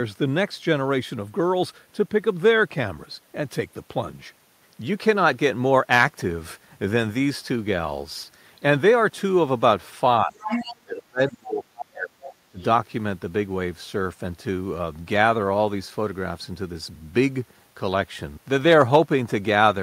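From 10.23 to 10.44 s the talker's speech dips by about 20 dB, then sinks far deeper, around 35 dB, from 10.8 to 12.22 s, and briefly again by about 25 dB at 12.51 to 12.59 s. This is speech suppressed in double talk: with both sides talking, the echo canceller likely mistook the talker for loudspeaker echo and turned everything down. Around these dips, the other side's voice leaks through, first fairly strongly, only about 5 dB under the speech, from 10.42 to 10.76 s, then as faint scraps around 20 dB down at 11.27 to 11.32 s and 12.24 to 12.34 s, and barely audible at 12.6 to 12.64 s. The echo canceller likely left residual loudspeaker pickup in the microphone signal.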